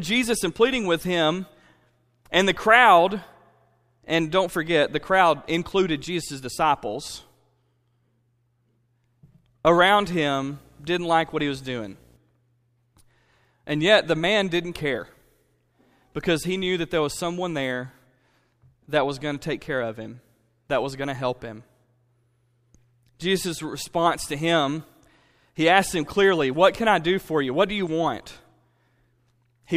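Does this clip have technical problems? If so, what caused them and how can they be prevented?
Yes. From 10.00 to 12.17 s, a video or display buzz sits under the speech. It is a 60 Hz buzz with a layer of hash above it, well below the speech level. A screen or its video cable was coupling interference into the audio path. The buzz follows the picture's field rate, so 60 Hz points to a 60 Hz display. Keeping audio cables away from monitors and video leads, and using balanced connections, would prevent it.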